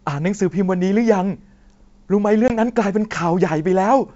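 At 2.48 to 2.58 s a 20 ms hole cuts the speech, then it returns slightly distorted: packet loss on an ADPCM call, about one packet, desyncing the decoder's predictor.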